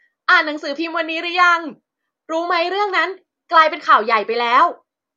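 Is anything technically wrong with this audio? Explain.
No, nothing technically wrong stood out on listening to this speech recording.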